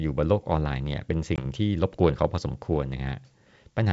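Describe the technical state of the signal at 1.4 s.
The speech drops into a hard-edged gap of about 20 ms, then returns with brief distortion, settling by 1.44 s (span 1.36–1.44 s). This is packet loss on an ADPCM call: a couple of packets were lost and filled with silence, leaving the decoder's predictor and step size out of step with the sender's until they realigned.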